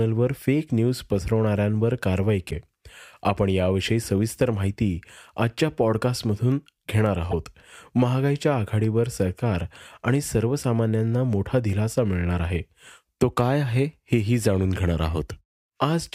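A speech clip with two brief glitches, at 2.50 to 2.53 s and again at 7.30 to 7.34 s, where the sound skips forward. Each lasts about one MP3 frame of 26.1 ms, likely a broken MP3 bit reservoir after frames were dropped. On the waveform each shows an abrupt discontinuity.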